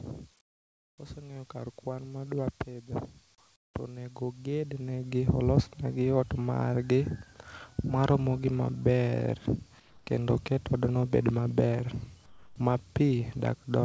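From 0.41 to 0.98 s the real background gives way to comfort noise. It is a flat, featureless noise, about 27 dB quieter. The sender likely stopped transmitting during the pause, and the receiver filled the gap with synthetic noise.

From 1.14 to 2.95 s the automatic gain is rising. Voice and background swell together by about 6 dB. The gain control judged the input too quiet.

Comfort noise returns from 3.56 to 3.74 s, about 23 dB down.

A second gain rise runs from 3.86 to 5.55 s, about 8 dB, ending just before "gi ot margi".

From 9.80 to 10.07 s the background is again replaced by steady comfort noise, about 6 dB quieter.

At 12.26 to 12.56 s, just after "odno obed maber", sound is dropped by the voice detector. About 0.11 s of sound vanishes under noise. The detector likely mistook quiet sound for background.

The call path carries nothing above 8 kHz.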